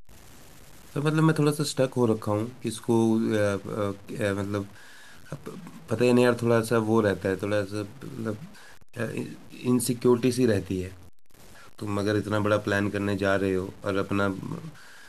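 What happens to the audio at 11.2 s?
At 11.2 s the speech carries the same grainy distortion heard throughout the clip, most likely low bit depth without dither: truncation to about 7 bits leaves signal-following error about 30 dB down. The waveform shows visible stair-steps, and the spectrogram shows broadband grit tracking each syllable.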